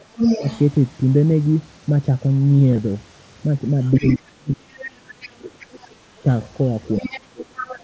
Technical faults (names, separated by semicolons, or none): speech suppressed in double talk; other side's voice leaking through; concealed Bluetooth headset packet loss